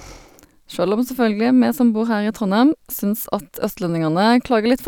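Nothing in the recording stood out as a technical fault on listening.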